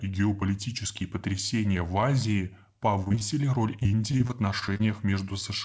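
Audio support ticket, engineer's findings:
Repeated packet loss (robotic sound) at 3.04–3.36 s and 3.79–4.83 s. Choppy stretches with pieces missing. The jitter buffer conceals the holes by extending the last audio. The longest hole is about 22 ms. The first burst is denser, with nearly half concealed. The second is sparser, at about 16%. Audio is band-limited to 8 kHz, which fits the G.722 call path.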